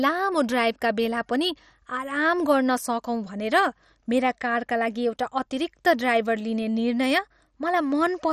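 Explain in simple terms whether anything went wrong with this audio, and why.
MP2 compression damage runs through the whole clip, from start to finish. The speech sounds dull and muffled, with a gurgling, grainy roughness, and nothing at all above about 13.9 kHz. The likely cause is heavy squeezing by the MP2 format, which splits sound into many narrow slices and, when short of data, switches the top slices off and stores the rest crudely, leaving that flickering, watery grit.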